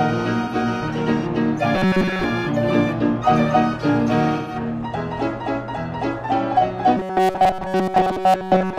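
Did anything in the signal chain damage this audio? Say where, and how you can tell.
Yes. At the codec stage, AAC frame loss with concealment damages the audio twice. About 85 ms goes missing at 0.43 to 0.55 s, which fits two lost frames, and about 128 ms at 4.36 to 4.55 s, which fits three. The decoder covers each gap by rebuilding it from the last good spectrum, with randomised phase or interpolated energy. Both gaps are short, so each is heard as a brief smeared, noisy, phasey patch rather than a dropout to silence.

At the driver or buffer stage, there is robotic sound from repeated short buffers at 1.75 to 2.24 s and again from 6.97 s to the end. New audio most likely arrived too late, so the same chunk of roughly 5.3 ms was replayed in place of fresh samples. In the first stretch this covers most of the audio. In the second it covers all of it. Repeating at that rate imposes a fixed 188 Hz buzz, which gives the sound a rigid, metallic tone that only loosely tracks the original.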